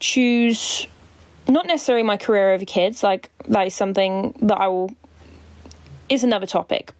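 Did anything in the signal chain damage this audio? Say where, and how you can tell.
Yes. Across the whole speech clip there's gain pumping, with a gain swing of around 25 dB. That's likely input gain set far too high, with a fast limiter clamping each peak and squashing the dynamics.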